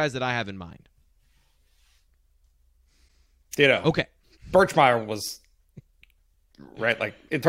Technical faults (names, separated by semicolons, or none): broken MP3 bit reservoir